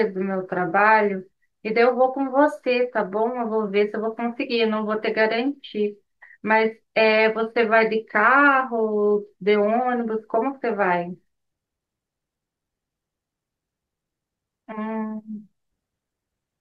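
No technical faults are audible.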